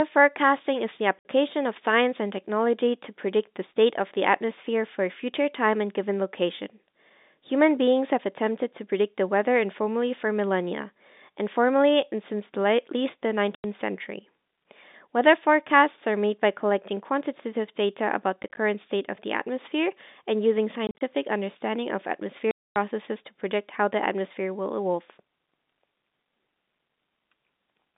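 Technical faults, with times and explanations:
1.19–1.25, 13.55–13.64, 18.43–18.57, 20.87–21.01 and 22.51–22.76 s, packet loss filled with silence: the speech drops to dead silence for 60 to 250 ms, in holes sized in steps that fit 10 ms packets, and each hole has hard edges. At 18.43 and 20.87 s the holes are scattered short gaps rather than a single hole. Because the gaps are true silence with hard edges, rather than smoothed over or faded, they point to lost packets, not concealment. Throughout the clip, the telephone band of about 200 Hz to 3.7 kHz can be heard.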